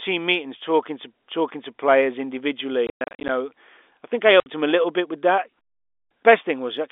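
From 2.87 to 3.29 s, packet loss filled with silence chops the speech. About 270 ms drops out in scattered holes, the longest 110 ms. The gap sizes fit 10 ms packets. The holes have hard edges. At 4.40 s, one 60 ms hole repeats this.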